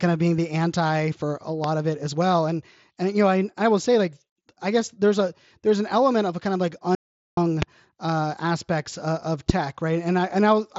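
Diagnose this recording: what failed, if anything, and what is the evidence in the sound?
Three loud pops sit on top of the speech, each a single sharp click of about 25 ms that the talker carries on through. The first, at 1.64 to 1.67 s, falls right after "the anti for a" and before "of it as well", peaking about 15 dB above the speech. Two louder ones, about 20 dB up, land at 7.62 to 7.65 s just before "uh aspects uh of" and at 9.50 to 9.52 s just after it. The stage is likely analogue wiring or the driver, where a brief voltage step from a loose connection or glitch is added to the signal.

An audio dropout to silence runs from 6.95 to 7.37 s. The speech cuts off mid-flow and returns 420 ms later, and the gap is dead digital silence with no room tone beneath it, so whatever was said there is lost. The likely cause is a momentary loss of the input at the device or link while the recorder kept writing silence, which fits the abrupt edges at both ends. 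The narrow mSBC headset band, with nothing above about 7.7 kHz, is audible before and after the gap.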